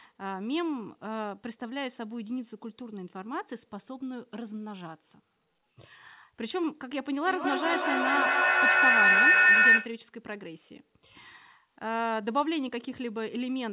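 Speech, carried over a narrowband call line with nothing above 4 kHz, which fits G.711 A-law. From 7.21 to 10.02 s a feedback howl builds: a second device in the room keeps re-feeding the loop, so a tone around 2 kHz swells, pulsing roughly every fifth of a second, to about 11 dB over the speech.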